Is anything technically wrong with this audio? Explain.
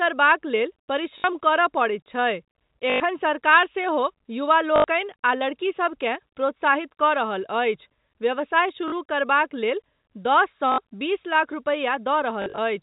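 Yes, the speech has packet loss with last packet repeated at 1.18, 2.9, 4.76, 8.88, 10.72 and 12.42 to 12.58 s. The final case is scattered over 160 ms, with no run longer than 40 ms. Each gap, 40 to 100 ms long, is filled by replaying the previous packet. The replay rarely matches the pitch, and a robotic stutter buzzes at about 50 Hz, which fits 20 ms packets. Unlike a plain dropout, these gaps repeat sound rather than going silent. The band-limited telephone sound of the G.711 coding is audible throughout.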